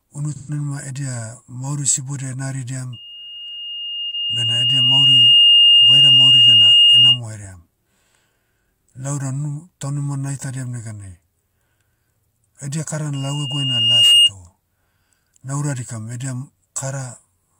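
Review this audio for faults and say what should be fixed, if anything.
AAC frame loss with concealment occurs at 0.36–0.51 s, 4.10–4.13 s and 8.66 s. Missing AAC frames were rebuilt by the decoder from the last good spectrum, leaving brief smeared, noisy patches. The first gap is about 128 ms, which fits three lost frames. Prevention: carry the stream over a link with forward error correction or retransmission so frames arrive intact.

Loudspeaker feedback squeal occurs at 2.93–7.20 s and again at 13.14–14.31 s, just after "edia kara". A 2.8 kHz tone builds over a couple of seconds the first time and about a second the second time, then sits well above the speech. The microphone was picking up its own loudspeaker with loop gain above one at that frequency. Prevention: lower the gain, move the loudspeaker away from the microphone's pickup, or notch out 2.8 kHz.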